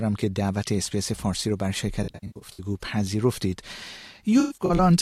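Smeared, phasey patches at 2.03–2.62 s and 4.40–4.79 s reveal AAC frame loss with concealment, with scattered dropouts rebuilt from the last good spectrum.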